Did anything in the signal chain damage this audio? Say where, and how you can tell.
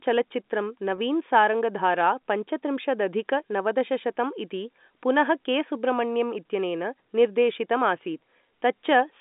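Yes, at the network stage: packet loss with pitch repetition at 0.96–0.98 s, just before "सारङ्गधारा पञ्चत्रिंशदधिक नवदशशतं इति". The 20 ms gap, which fits two 10 ms packets, is bridged by a repeated pitch period. That gives a brief buzzy hold rather than the silent hole or click of a true dropout.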